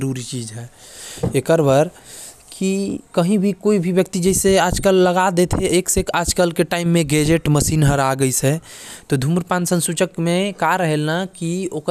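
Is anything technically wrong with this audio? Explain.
No, nothing in this speech recording stood out as a technical problem on listening.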